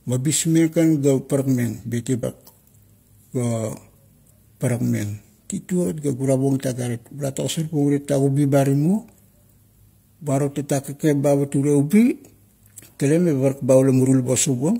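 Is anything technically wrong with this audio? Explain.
Yes. Compressed frames are skipped at 2.19 to 2.24 s: about three frames (roughly 150 ms) never decode, so the speech jumps ahead abruptly at the join.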